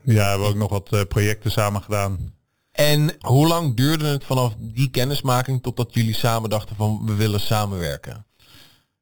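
Throughout the speech, imaging from sample-and-hold upsampling adds a bright metallic fizz that rises and falls with the voice. Each sample was repeated without a smoothing filter, which fits 8 kHz audio raised to 48 kHz, leaving a mirrored copy between 4 kHz and 8 kHz at about -15 dB.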